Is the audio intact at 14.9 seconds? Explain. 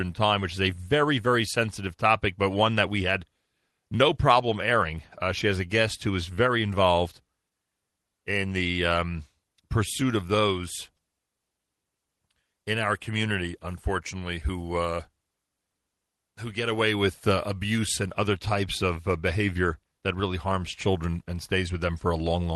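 Yes, the speech at 14.9 seconds is intact, with no dropout, glitch or other fault at that moment beyond the ordinary character of the call path it passed through.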